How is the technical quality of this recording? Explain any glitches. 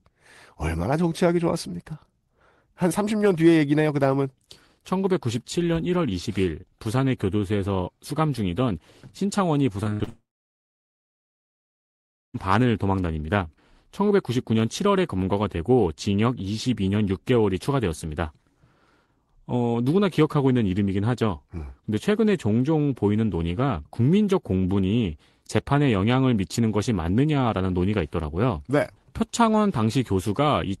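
The recording has two connected glitches, both around the 10-second mark, sitting on top of a call-codec sound that rolls off the top end at about 12 kHz.

From 9.83 to 10.09 s you get repeated packet loss, the robotic kind. Audio kept arriving late or not at all, and the receiver covered each hole by stretching out the last bit of sound it had. There are several short holes, the longest about 65 ms, and roughly half that quarter-second is patched-in filler. That's why it comes across choppy, with chunks missing.

Right after, from 10.09 to 12.36 s, there's a long network dropout. It sounds like the stream just stops. The last sound gets dragged out briefly as a fading buzz or hiss, then it goes quiet for about two seconds. When the audio picks up again at 12.36 s, whatever should have been in that gap is simply gone. The likely cause is the connection stalling completely, rather than the device or the recording itself.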